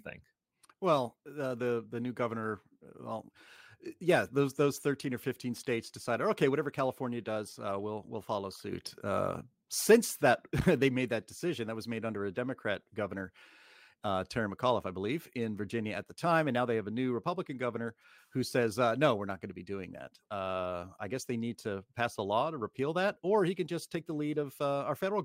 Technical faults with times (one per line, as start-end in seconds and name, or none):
none